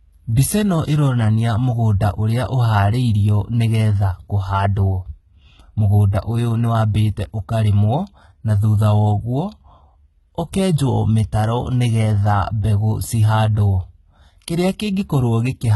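Speech, and the whole thing has that heavy low-bitrate sheen: the top end sounds synthetic, with s sounds coming out gritty and lispy and nothing at all above about 11.8 kHz. That's most likely HE-AAC compression, where only the lower spectrum is really coded and the treble is rebuilt by copying lower bands upward, so the harmonics don't line up. The damage fits HE-AAC v2 squeezed to around 16 kbps.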